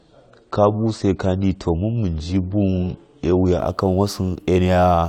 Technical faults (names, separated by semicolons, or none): adaptive stream starting at a low bitrate